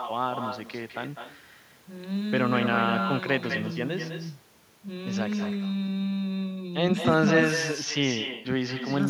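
From start to finish there's echo with no canceller: the far end's loudspeaker feeds its mic and nothing strips it out, so every phrase comes back about a fifth of a second later, roughly 8 dB down and thinner, like a ghost trailing the speech.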